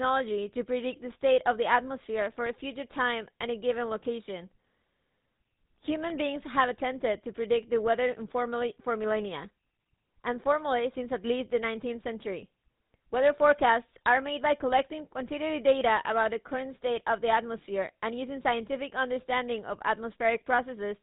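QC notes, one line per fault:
Throughout: GSM full-rate codec, buzzy gravelly roughness from pulse-driven vocal-tract modelling, nothing above 4 kHz, unlike plain band-limiting which leaves timbre smooth.
6.10 s: bit error spike, one sharp broadband tick from a few corrupted samples jumping and snapping back, unrelated to the speech, not a recurring click.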